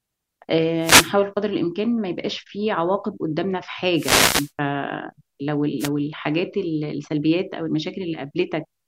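Short bursts of static swish over the speech at 0.78 to 1.14 s, 3.94 to 4.52 s and 5.79 to 5.89 s. These are wireless microphone noise hits: the analogue FM radio link fades as reflections cancel, and receiver noise briefly rises over the speech.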